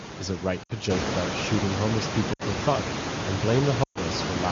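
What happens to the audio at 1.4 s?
Nothing goes wrong at 1.4 s: the speech comes through intact, with only the room's own background noise sitting about 7 dB beneath it.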